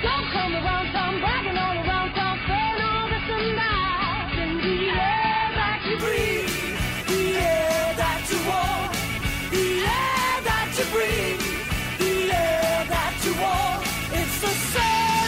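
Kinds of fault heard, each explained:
Adaptive stream starting at a low bitrate: the player opened on a cheap, heavily compressed version of the stream to start quickly, then switched to a richer one once it had gauged the connection. For the first 6.0 s the treble is missing and codec artefacts are stronger, which fits a rate near 16 kbit/s. At 6.0 s quality jumps with no gap, likely to about 96 kbit/s. A spectrogram shows a flat ceiling at 5 kHz that suddenly lifts.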